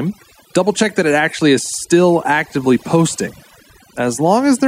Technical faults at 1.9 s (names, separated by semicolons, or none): overdone noise removal